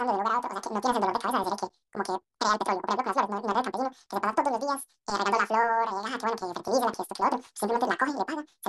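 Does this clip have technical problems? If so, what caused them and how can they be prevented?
Yes. Throughout, the speech has the fault of audio read two samples at a time (double speed): each pair of samples is consumed as one frame, so playback runs at 2.0 times normal speed and an octave high. Prevention: declare the stream's true channel count and sample width to the reader.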